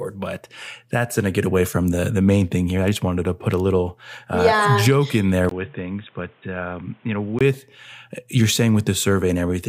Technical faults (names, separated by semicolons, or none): input switched to a poorer device